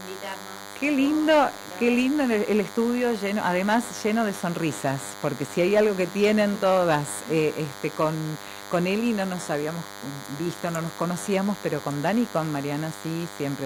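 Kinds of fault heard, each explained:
DECT cordless phone buzz: a nearby DECT handset or base sends a radio burst every 10 ms, so a thin 100 Hz buzz with many harmonics sits well below the sound throughout.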